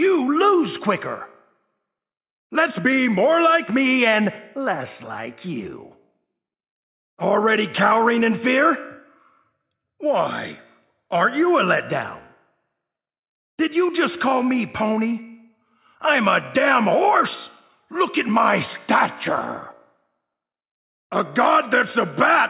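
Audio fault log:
No faults heard.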